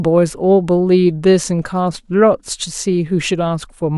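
A short speech recording with no technical faults to report: the signal carries no audible defects at any point.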